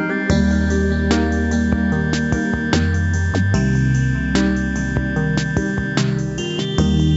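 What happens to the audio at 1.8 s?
At 1.8 s the audio is intact, with no fault to be heard; it simply carries the ordinary character of call microphone processing, with the lowest bass trimmed.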